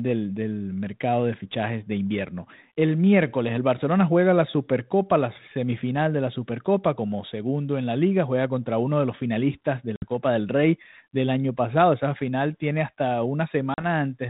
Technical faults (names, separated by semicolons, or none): packet loss on an ADPCM call